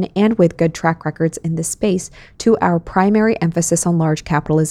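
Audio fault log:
Nothing to flag here, the speech comes across without any audible technical problems.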